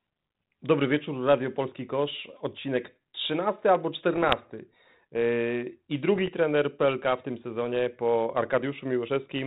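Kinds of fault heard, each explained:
Bit errors on an ADPCM link: two short patches, around 4.14 to 4.35 s and 6.15 to 6.31 s, where the sound breaks into pops and gritty bursts with quick jumps in level. Bits flipped at a small fraction of a percent in an adaptive coder that fits 32 kbit/s G.726. Each bad bit throws the decoder's step size and prediction off, so the damage smears on for a few milliseconds instead of clicking once.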